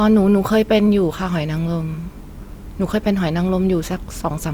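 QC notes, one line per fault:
No faults heard in this speech recording.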